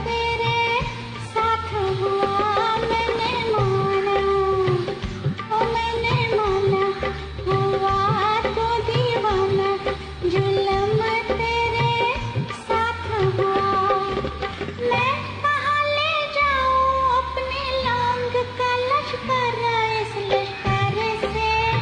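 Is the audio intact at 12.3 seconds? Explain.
Yes, at 12.3 seconds the audio plays through cleanly, with no dropout, click, distortion or other fault to be heard at that point.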